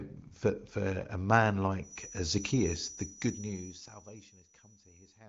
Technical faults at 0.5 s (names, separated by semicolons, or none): none